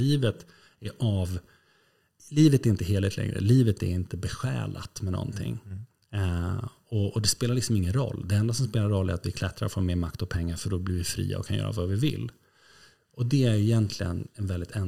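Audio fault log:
0.00–2.00 s, adaptive stream starting at a low bitrate: the speech opens thin and smeared, with the treble rebuilt synthetically and heavier codec artefacts, which points to an HE-AAC stream near 32 kbit/s chosen for a fast start. At 2.0 s the player steps up, which fits AAC-LC near 96 kbit/s, and clarity jumps with no gap. On a spectrogram, the upper band is patchy and copied before 2.0 s, then dense up to a clean cut-off at 17.1 kHz.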